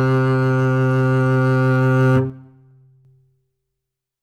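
From 2.30 s to 3.05 s the music abruptly drops by about 6 dB for roughly three quarters of a second, then snaps back to full level. The step is sudden at both edges, with no fade, and any material that sat only on the lost side of the stereo image vanishes for that stretch. This is most likely one channel dropping out: with one side lost, the mono sum keeps only half of the shared content.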